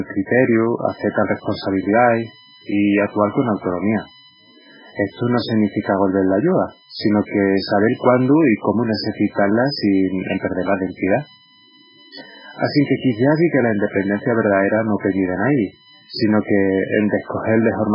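Right from the start the speech sounds watery and swirly, with nothing above 5.3 kHz. That's likely heavy MP3 compression at a very low bitrate, somewhere near 8 kbps, cutting the treble and dropping weak detail. At 0.84 s a steady USB whine comes in and runs to the end. It's a fixed 1 kHz tone strongest at its 3 kHz harmonic, sitting about 30 dB under the speech, from bus current leaking into the power or ground.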